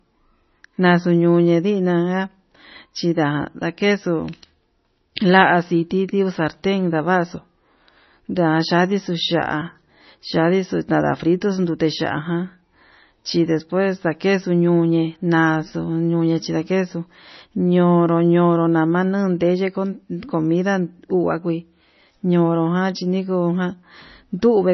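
Throughout, the speech has nothing above 6 kHz and a watery, swirling texture with smeared consonants, likely heavy MP3 compression at a very low bitrate, around 24 kbps.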